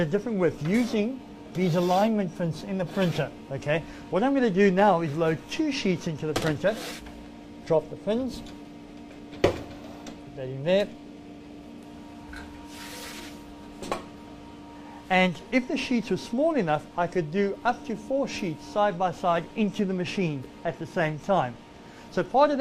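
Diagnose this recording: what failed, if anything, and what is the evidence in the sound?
Nothing stood out on listening that would point to a failure at any stage of the chain.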